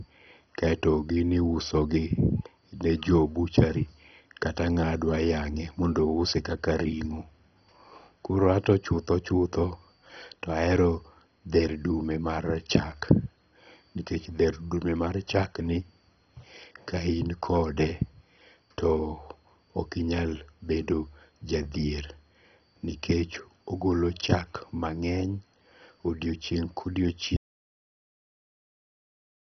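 Throughout the speech, nothing is heard above 6.1 kHz, so it sounds dull. A gurgling, granular distortion runs through it. This is heavy MP2 compression. Too few bits, fitting roughly 32 kbps, likely switched off the upper sub-bands and coarsely quantised the rest.

At 27.36 s the audio drops out to silence and never returns. The gap is silent, with no room tone at all. The input was likely lost while the recording carried on writing silence to the end.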